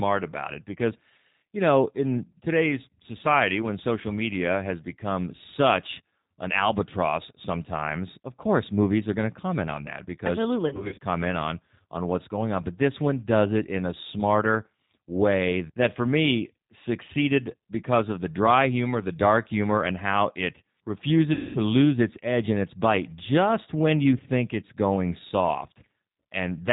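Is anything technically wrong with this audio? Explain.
Yes. This speech has passed through a G.729 codec for its whole length. The sound fits G.729A at 8 kbit/s. That coder rebuilds each short frame from a vocal tract filter, a pitch predictor and a few pulses, and it discards everything above 4 kHz. The damage is plainly audible: the speech stays intelligible but sounds dull, slightly rough and synthetic, with no high-frequency air.

Packets are missing at two points, and the speech codec conceals the gaps. From 10.68 to 10.99 s, about 180 ms of audio is lost, scattered across roughly 300 ms in runs of up to 50 ms. From 21.33 to 21.59 s, about 220 ms goes missing. In each gap the decoder keeps extending its last pitch and filter settings while turning the level down. The sound smears into a buzzy tone or a coloured noise that fades. Because each frame builds on the one before, the speech stays weak or distorted for a moment after real packets resume.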